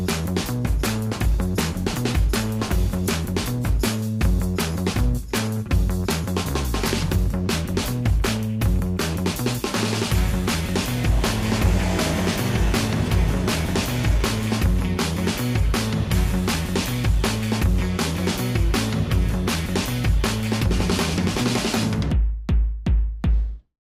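Nothing in the recording stood out as a problem on listening.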